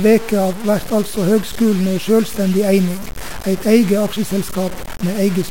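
From start to finish, the speech carries a grainy distortion that tracks the sound. Quiet passages turn gritty. The likely cause is low bit depth without dither: truncation to about 5 bits. The error sits roughly 15 dB below the signal.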